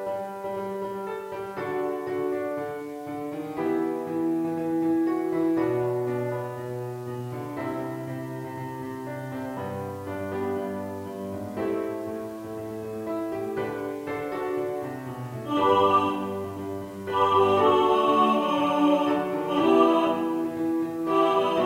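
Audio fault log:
Throughout: low bit depth without dither, likely 8-bit rounding; grainy distortion about 30 dB down follows the sound and stops with it, unlike steady hiss.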